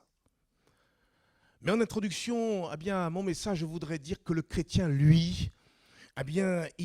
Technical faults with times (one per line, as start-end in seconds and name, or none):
none